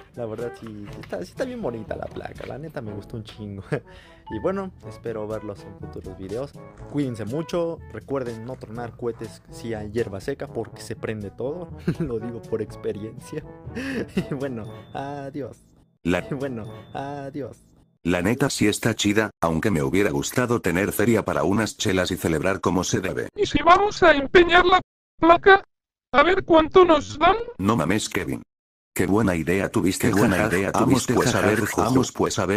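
At 16.19 s the stream jumps back. The two seconds up to 18.19 s play again, so that stretch of audio is heard twice. A small blip marks the jump. This is a stream segment repeated. The player fetched or queued the same chunk of the stream a second time. It then played that chunk again before moving on, which adds two seconds to the programme.

At 24.81 s the sound cuts out in mid-flow. Silence lasts about 0.37 s, until 25.20 s. Then the audio resumes. This is a playback stall. The output simply stopped producing sound for that gap. The likely cause is the player running short of data, or its playback thread being held up, until it could carry on.

From about 30.0 s to the end, a second copy of the audio joins in. It trails the original by roughly one second and is about as loud. It starts abruptly. It carries no decay or room colour, just the full-band sound again, late. This is a doubled audio track. 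The likely cause is the same signal being mixed in twice, with one copy arriving by a slower path.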